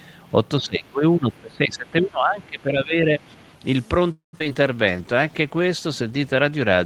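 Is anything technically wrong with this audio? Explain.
Yes, several faults. From 0.58 to 3.2 s the speech dips repeatedly, by up to about 20 dB over roughly two seconds in total. This is likely speech suppressed in double talk, the echo canceller ducking everything while both sides talked.

At 2.41 to 2.45 s and 3.41 to 3.49 s faint scraps of another voice appear, about 40 and 35 dB below the speech. That is likely the other side's voice leaking through as residual loudspeaker echo.

From 4.11 to 4.35 s the sound stalls. A fading tail gives way to near silence for about 130 ms, then the speech resumes intact. This is likely a call audio freeze: the jitter buffer ran dry, inserting a 217 ms gap.

From 4.39 to 4.57 s the audio turns choppy. Four short holes, none longer than 13 ms, are patched. This is repeated packet loss giving a robotic sound.

From 4.76 s to the end the sound turns rougher and more muffled. 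A call bitrate drop from 32 to 17 kbps made Opus code more coarsely.

From 4.91 to 5.63 s the speech drags at about 90% speed with unchanged pitch. This jitter buffer slow-down stretched sounds by 78 ms to rebuild its reserve.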